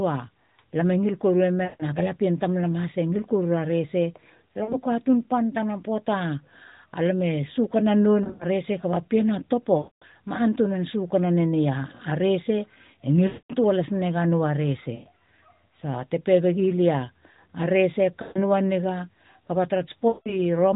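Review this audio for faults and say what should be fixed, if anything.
Lost AMR speech frames at 1.64–1.83, 4.64–4.76, 8.24–8.46, 9.78–10.04 (before "ma antunan sukana"), 13.28–13.54 (before "toa lasina"), 14.94–15.09, 18.22–18.44 and 20.08–20.37 s. The decoder stretches the last good pitch and vocal-tract shape with fading gain, so speech smears and thins rather than clicking or dropping abruptly as a plain gap would. Stronger radio error protection or jitter-buffer redundancy would prevent it.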